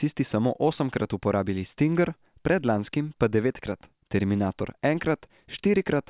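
A speech recording, and nothing is technically wrong with it.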